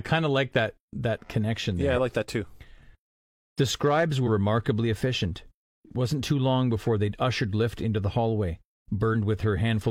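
At 4.23 s and again at 9.11 s the speech jumps forward by roughly 50 ms, with compressed frames skipped: whole coded frames never reached playback. Each join shows as a short vertical discontinuity in the spectrogram.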